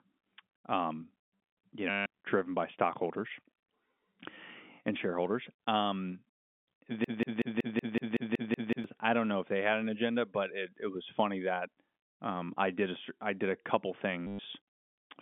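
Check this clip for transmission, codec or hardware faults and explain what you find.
Two kinds of fault are audible in this speech: packet loss concealed by repetition, twice, and one broken-record loop.

Packet loss with last packet repeated occurs from 1.90 to 2.06 s, just before "driven by stockholders", and from 14.27 to 14.39 s, right after "I did a couple". About 160 ms and 120 ms of audio went missing. The receiver filled each gap by replaying the last packet it held. The run buzzes at roughly 100 Hz, which fits 10 ms packets. Both gaps come across as a brief robotic stutter.

A broken-record loop runs from 7.04 to 8.84 s and ends just before "I don't know if". A fragment of about 187 ms repeats exactly, back to back, about ten times. This is likely a stalled player, encoder or stream that kept resending the last chunk it had. The speech that belonged in those 1.8 seconds is gone, replaced by the same sliver of sound cycling mechanically.

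All of this sits within the narrow telephone band of the G.711 line, roughly 200 Hz to 3.5 kHz.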